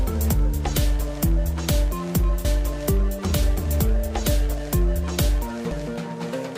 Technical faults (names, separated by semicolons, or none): damaged data in a compressed stream